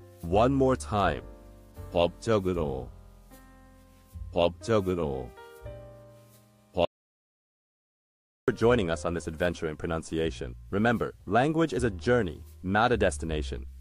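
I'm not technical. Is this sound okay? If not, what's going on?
No. From 6.85 to 8.48 seconds the sound cuts out completely for about 1.6 seconds, leaving dead silence with no background at all. This is an audio dropout to silence, likely from the input briefly disconnecting or muting while recording continued, so anything in that gap is lost.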